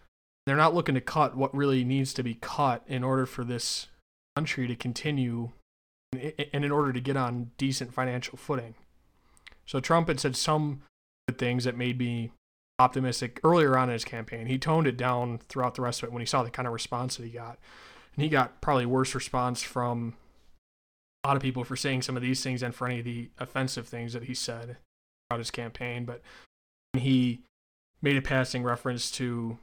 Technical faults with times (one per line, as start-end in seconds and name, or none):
0.00-29.63 block size mismatch (truncated)
0.35-0.47 clipped start after a pause
4.23-4.37 clipped start after a pause
6.01-6.13 clipped start after a pause
11.15-11.28 clipped start after a pause
12.68-12.79 clipped start after a pause
21.12-21.25 clipped start after a pause
25.19-25.31 clipped start after a pause
26.82-26.94 clipped start after a pause